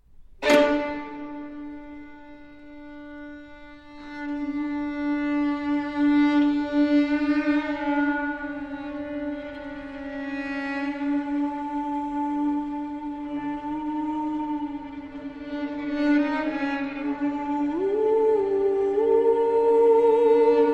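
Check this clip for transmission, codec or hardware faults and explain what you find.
One hardware fault shows up near the end: sample clock jitter from 17.79 s to the end at 20.73 s. The converter's clock wanders by around a microsecond, so each sample is taken slightly early or late at random. Because that timing error turns into an amplitude error wherever the waveform is changing quickly, it adds a faint hiss or grain about 50 dB below the sound. The roughness is strongest on loud, bright passages and drops away in quiet moments.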